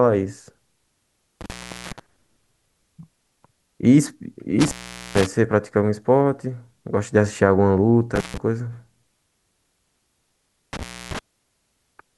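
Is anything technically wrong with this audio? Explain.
Yes. This speech has an intermittent contact fault, dropping out at 1.41–1.99 s, 4.59–5.26 s, 8.15–8.37 s and 10.73–11.19 s. A loose connection opens briefly, for about 420, 440, 130 and 280 ms, so the signal vanishes between crackly edges. The waveform collapses to a near-flat line bracketed by spikes, and the spectrogram shows broadband vertical streaks around empty gaps.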